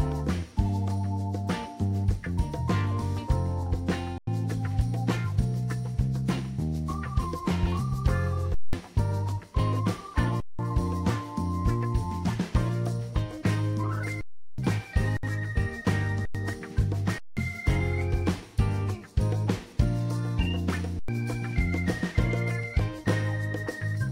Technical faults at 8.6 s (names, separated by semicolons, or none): underrun with held sample